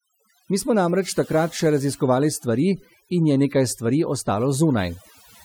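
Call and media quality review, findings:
Overdone noise removal, throughout. Noise suppressor set too aggressive: bands near its noise estimate are pulled far down or gated off, taking quiet speech detail with them. Background drops, with twinkling specks.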